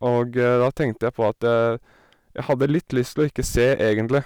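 The whole clip has hard clipping running right through it. The speech was pushed about 6 dB past what some stage in the chain could pass, so the loudest peaks hit the ceiling and got sliced off flat. Only a small slice of the waveform, a few percent, actually goes over, so you hear it as a gritty crackle riding the stronger syllables, with those squared-off tops throwing bright harmonics up into the high end.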